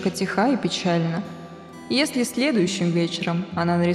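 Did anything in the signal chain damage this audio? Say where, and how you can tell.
No, nothing in the signal chain audibly damaged this audio. No stage from capture through to playback leaves any trace in what can be heard.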